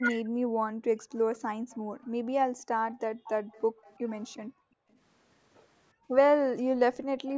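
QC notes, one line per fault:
0.00 to 0.73 s, speech suppressed in double talk. The speech dips sharply at the very start, by roughly 40 dB at its deepest, for about half a second in all. The likely cause is both ends talking at once. The echo canceller could not tell the near talker from the far-end signal in its loudspeaker, so it turned the whole microphone feed down.
1.10 to 2.06 s, 2.98 to 4.36 s and 4.92 to 4.98 s, echo leak. A faint delayed copy of the speech trails the original by 354 ms each time. It sits roughly 25 to 40 dB below the speech, strongest in the middle stretch and barely there in the short last scrap. The likely cause is a loudspeaker at one end. That end's echo canceller left part of the pickup in the signal and sent it back.
1.79 to 3.84 s, 4.40 to 4.90 s and 5.93 to 6.08 s, background gated by the echo canceller. The room tone drops away and then returns. The drops reach about 39 dB, 38 dB and 35 dB. 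The first run covers about a second in total, the second half a second, and the last a brief 150 ms. While the loudspeaker played, the canceller clamped the microphone hard, so the background vanished until it let go.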